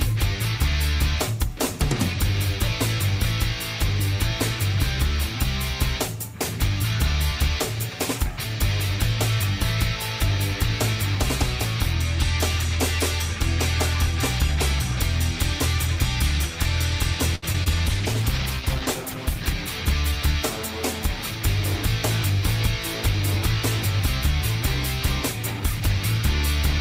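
At 17.35 s there is a short stall from a late packet. A packet arrived behind schedule, the jitter buffer emptied, and the receiver held the last sound for about 70 ms until the data turned up, then resumed from the same point. Nothing is lost, but the sound hangs briefly with a slight buzzy sustain, and everything after it plays about 70 ms later than before.

Two short concealed packet losses follow, at 17.52 s and 17.64 s. In each, about 20 ms of audio failed to reach the decoder in time, and the receiver extrapolated from the preceding signal to cover the gap before crossfading back into real audio. Both are heard as tiny smears or wobbles, close together right after the stall.

From 17.88 s to 20.49 s there is a call bitrate drop. The bandwidth estimate fell, and the encoder was pushed from 48 kbps down to 15 kbps, staying at the lowest rate for roughly a second. At that rate Opus quantises coarsely and trims the upper band, so the sound becomes duller and watery. 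It regains its brightness and clarity as the rate climbs back toward 20.5 s.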